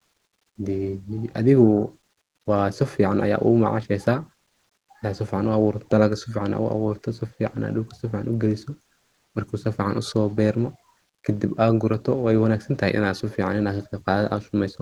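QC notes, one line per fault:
No faults: the speech runs steadily over a call path whose top end reaches about 12 kHz, which fits an Opus codec in a super-wideband setting.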